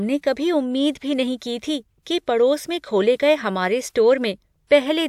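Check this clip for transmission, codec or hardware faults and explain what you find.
No faults turn up anywhere in the speech. There is nothing here that needs explaining or tracing back to a cause.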